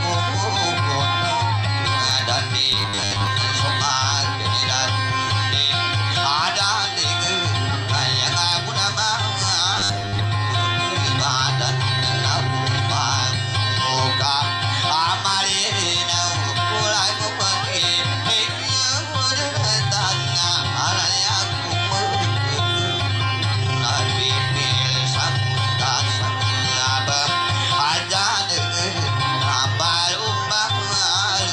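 From 2.72 to 3.27 s and again from 9.78 to 10.24 s there's robotic sound, a stiff 100 Hz metallic buzz, likely from repeating 10 ms buffers when fresh audio arrived too slowly.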